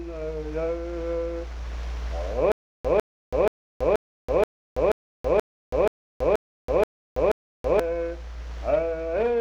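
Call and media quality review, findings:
Stutter with silent gaps, 2.52–7.80 s: 152 ms burst repeats 11 times, 328 ms digital silence between, 480 ms period. Likely player/stream stall, last fragment replayed per retry; intervening audio lost.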